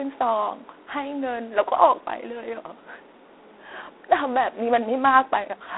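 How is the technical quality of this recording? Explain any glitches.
The quality is poor: the speech carries a plainly audible coding fault from start to finish.

G.726 ADPCM, throughout the clip: each sample is sent as a few bits describing its difference from an adaptive prediction, and with too few bits the error becomes a harsh, rasping hiss that rises and falls with the speech. The roughness fits the 24 kbit/s mode. Band-limiting to roughly 300 Hz to 3.7 kHz, with nothing above 3.9 kHz, makes it sound muffled and telephone-like.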